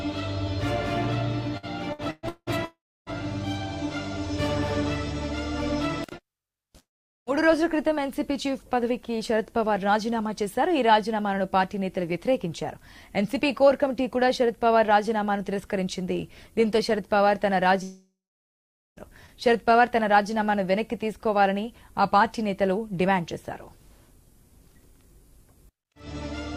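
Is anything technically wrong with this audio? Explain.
Yes. From 1.57 to 2.50 s there is repeated packet loss with a robotic sound: four short holes, the longest about 0.18 s, are each patched by stretching the preceding sound. Nearly half that span is synthetic fill, so it sounds choppy. The gaps are brief and closely spaced.

Three long network dropouts are the likely cause of the breaks at 2.65–3.09 s, 6.79–7.29 s and 17.83–18.99 s. Each begins with a fading buzz or hiss continuing the last sound, then goes silent for about 0.3 s, 0.42 s and 0.84 s. The audio returns with roughly 0.42 s, 0.48 s and 1.14 s missing. The single extended gap going fully silent distinguishes these from the packet-loss stretch.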